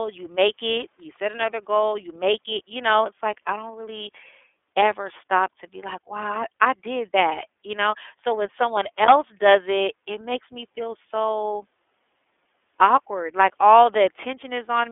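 Speech, narrow and boxy throughout, with a slightly rough, synthetic edge that is plainly audible on every phrase. The band runs only from about 250 Hz to 3.5 kHz, and nothing above 3.7 kHz survives. This is the iLBC codec: each 30 ms frame's excitation is coded on its own, without help from the previous frame, which leaves that grainy texture, and the rate heard fits its 13.33 kbps mode.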